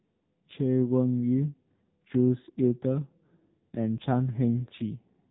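From start to finish, the speech carries the AMR narrowband mobile codec sound: nothing above about 3.8 kHz, and a heavy buzzy, synthetic edge from pulse-driven vocal-tract modelling starved of bits, which points to a low mode around 6.7 kbps.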